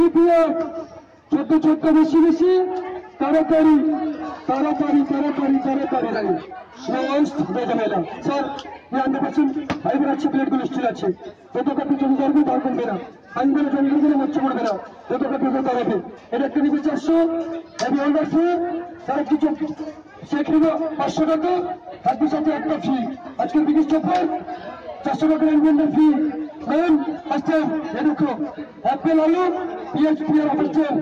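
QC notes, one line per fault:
No fault to note.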